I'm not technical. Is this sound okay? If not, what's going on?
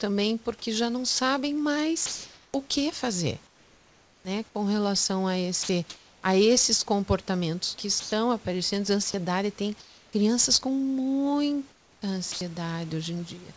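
No. In the pauses at 2.06 to 4.25 s, 5.63 to 6.23 s, 8.00 to 10.13 s and 11.72 to 12.41 s, the natural room background turns into a flat, even hiss. This is comfort noise in place of the background, likely because the call stops sending during silence and the receiving end fills the gap with made-up noise.

At 4.23 s, the speech comes back with a hard edge, as if its first sliver was shaved off. This is an onset clipped by the voice detector, likely because the sender was a split second late noticing that speech had resumed.

Brief bits of speech vanish into that hiss at 5.63 to 5.69 s, 9.11 to 9.14 s and 12.32 to 12.41 s. This is sound dropped by the voice detector, likely because quiet speech was mistaken for background and not sent.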